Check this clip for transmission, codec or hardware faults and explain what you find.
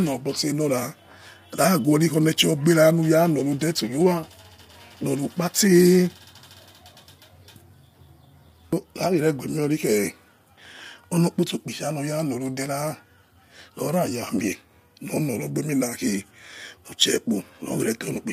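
One codec fault runs through the whole recording. Low-delay AAC compression, throughout: the speech sounds rough and grainy, with noise filling the gaps between harmonics and nothing above 15.6 kHz. The likely cause is AAC-ELD, whose short frames blur pitch detail at a rate that fits about 32 kbps.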